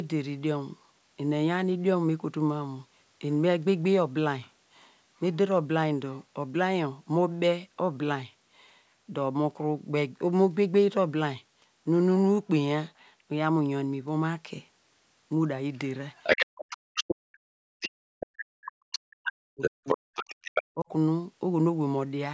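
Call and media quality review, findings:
Other side's voice leaking through, 16.15–17.04 s, 17.80–17.89 s, 18.92–18.99 s and 19.61–20.63 s. Far-end talker audible in the send path, roughly as loud as our talker in the longer stretches and about 10 dB under in the short scraps. Likely residual echo: loudspeaker playback reaching the mic and not fully cancelled by the AEC.

Speech suppressed in double talk, 16.5–17.63 s and 18.02–20.14 s. Near-end voice ducks hard, down by as much as about 40 dB, roughly a second and two seconds total. Lines up with the leak windows, so it's likely the AEC/suppressor failing to separate near-end from echo and clamping both. Smaller dip at 20.74–20.90 s, about 25 dB. Call mic high-pass and the 8 kHz band limit are normal.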